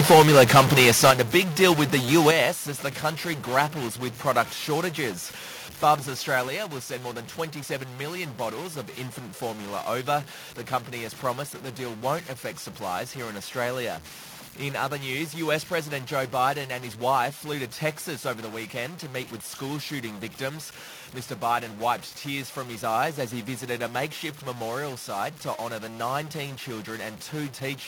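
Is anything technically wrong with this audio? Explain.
Yes, there are three kinds of fault in this speech clip.

Throughout, the sound carries a constant layer of added noise and distortion that tracks the waveform, and the pauses do not fall silent but fill with noise. This points to a stuck bit, most likely a converter or data line with one bit held at 0 or 1. About half of all sample values are shifted by that bit's weight. Because that shift flips with the sign of small values, noise appears even in the gaps.

From 0.0 to 1.72 s, and again from 2.15 to 2.28 s, the loudest syllables take on a crackling, flattened edge. This is microphone overload, likely caused by an input volume set too high. In the first stretch the signal runs about 11 dB past the converter's limit, and around one sample in twenty has its top cut off. The second stretch is only about 1 dB over, with under 1% of samples clipped.

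The level of the voice and the background drops abruptly four times. The first drop is about 2 dB at 0.12 s. The second is about 7 dB at 1.11 s. The third is about 6 dB at 2.31 s, just after the second clipped stretch and right before "as the country grapples". The last is about 3 dB at 6.48 s, just before "will send more than". These are microphone volume stepped down events, likely the call software lowering the device's input gain in single steps after detecting an over-loud signal.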